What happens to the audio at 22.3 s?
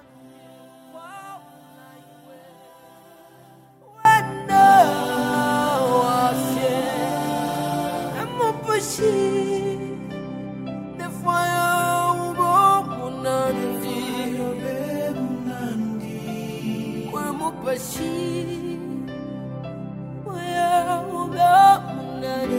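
Nothing goes wrong at 22.3 s; the audio there plays through intact, with no fault to be heard.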